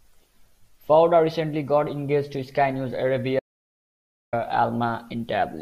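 An audio dropout to silence runs from 3.39 s to 4.33 s, removing about 0.93 s of the speech. The most likely cause is that the input signal was lost for a moment, through a device disconnecting, a link failing or a mute being switched on, while recording carried on and wrote silence. The voice stops abruptly mid-flow and the gap holds no room tone at all. It then cuts straight back in, and whatever was said in that stretch is missing.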